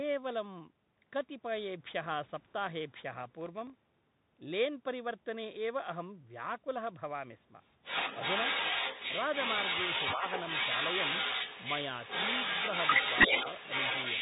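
The whole clip is speech coming through a Bluetooth CVSD headset codec, and the damage is plainly audible. That one-bit-per-sample delta coding at 64 kbps leaves nothing above 3.8 kHz, so s sounds come out scratchy, loud bright bits distort as the step size can't keep up, and a grainy hiss sits under everything.

Right at the start, from 0.27 to 0.35 s, there's a faint echo leak, a copy of the voice about 30 dB down trailing it by 306 ms. That's likely the far end's loudspeaker bleeding into its mic past an echo canceller that didn't catch it all.

From 3.20 to 3.83 s you get processor overload crackle. Buffers of well under a millisecond are missing their deadlines, around twenty of them, and each miss drops in a sliver of silence. Strung together they make a gritty tearing that stops once the load clears.

The echo leak comes back at 7.82 s and runs to the end, and this time it's nasty. 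The same 306 ms delayed copy is now roughly as loud as the speech or louder, so it reads as a second overlapping voice rather than a faint ghost.

Inside that stretch, from 10.16 to 10.23 s, the speech briefly ducks by about 5 dB for roughly 70 ms. That's speech suppressed in double talk, likely because the canceller couldn't tell the talker apart from the echo and pulled both down together.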